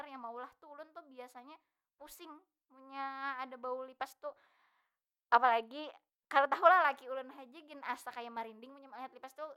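Nothing stood out as a technical fault on listening to this speech recording.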